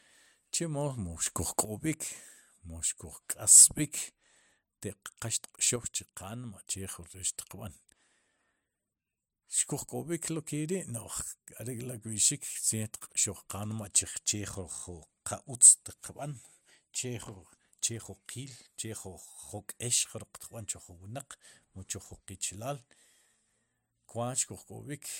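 At 1.26 s the speech and its background noise step up together by about 8 dB, then drop back at 1.65 s; from 5.76 s to 6.68 s both fall by about 6 dB. Each is a sudden gain jump, likely a digital gain setting applied without a ramp.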